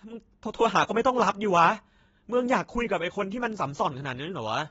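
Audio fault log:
Throughout, AAC compression: the speech sounds dull and smeared, with nothing above 7.7 kHz and a plainly audible warbling, fizzy texture on sibilants and held sounds. The likely cause is AAC-LC at a low bitrate, which fits roughly 24 kbps: the coder drops the top band and quantises the remaining frequency lines coarsely, leaving holes or noise-filled bands. A simple low-pass filter would dull the sound without that shifting, watery grain inside the remaining band.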